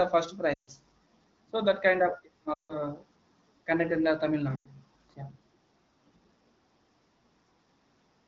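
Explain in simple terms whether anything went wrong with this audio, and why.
Three times the speech quickly drops to near silence: 0.53 to 0.70 s, 2.53 to 2.77 s and 4.56 to 4.68 s. These are lost AMR speech frames. Radio errors spoiled parts of the HD Voice signal, so the phone repeated the last good sound ever more quietly until real speech resumed.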